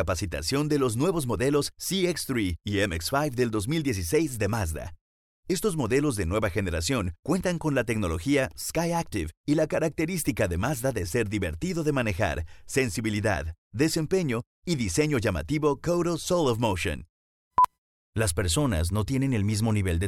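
No technical faults can be heard anywhere in the clip.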